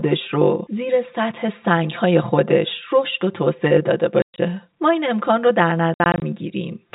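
Throughout the clip there is channel delay (comb filtering): one channel runs roughly 5 ms behind the other, and when the two are summed to mono, the shared content cancels at evenly spaced frequencies starting near 100 Hz. The speech sounds hollow and phasey. On a spectrogram this appears as fixed horizontal dark bands repeating up the spectrum, which stops at 4 kHz because of the telephone-band G.711 path.

Packet loss filled with silence occurs twice. Between 4.22 and 4.38 s, 140 ms of audio drops out across a 160 ms stretch, and the longest gap lasts 120 ms. Between 5.94 and 6.22 s, another 140 ms is scattered over 280 ms, with runs of up to 60 ms. The gap lengths fit 20 ms packets. Missing packets were replaced with digital silence, so the speech is chopped into holes with hard edges. The waveform drops to near-silence, and the spectrogram shows blank vertical slots.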